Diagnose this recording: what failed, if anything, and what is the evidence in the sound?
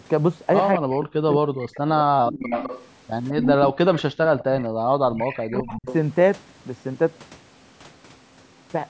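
The speech gets hit by speech suppressed in double talk three times: from 0.78 to 2.53 s (about 1.5 s of it actually affected), 3.44 to 3.79 s, and 5.21 to 5.85 s. In each stretch the voice sinks hard, by something like 40 dB at worst, and then recovers. That's call processing at the talker's end. The echo canceller likely couldn't tell the near talker from loudspeaker echo while both sides were active, so it pulled everything down together.

There's also an echo leak, a copy of the voice trailing it by 208 ms. First there's a brief scrap at 0.93 to 0.99 s, faint, roughly 30 dB under the speech. Then from 2.44 to 5.94 s it's much stronger, only about 5 dB below the direct voice, so you hear a doubled, lagging version. The far end is likely on a loudspeaker, and its canceller let part of the microphone pickup slip back into the call.

Background gated by the echo canceller shows up at 4.69 to 4.93 s. 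The room tone drops out for roughly a fifth of a second, about 40 dB down, then comes straight back. That's the canceller clamping the microphone while the loudspeaker was playing and releasing once it decided the echo had passed. It's the same processing stage as the other two faults, just acting on the background instead of the voice.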